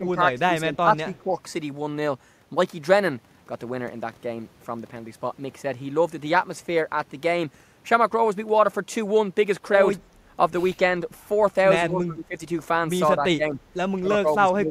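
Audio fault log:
0.00–0.16 s, 0.41–1.31 s, 11.90–12.35 s, 13.17–13.58 s and 13.98–14.70 s: speech suppressed in double talk. The speech dips in level and breaks up in patches, by about 10 to 20 dB at worst. This is likely an echo canceller turning down the near talker while the far side spoke.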